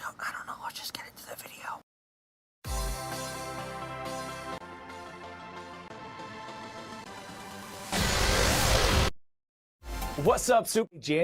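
Around 8.77 to 8.88 s there's a frames out of order glitch: two neighbouring chunks of roughly 52 ms swap places, giving a garbled flutter.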